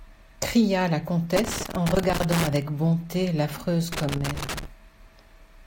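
A speech recording with loose connector crackle in two bursts, from 1.36 to 2.62 s and from 3.92 to 4.65 s. A worn or dirty contact is making and breaking, chopping the signal into irregular scratchy crackle. Its uneven, clustered timing distinguishes it from the clean, brief silent gaps of digital dropouts.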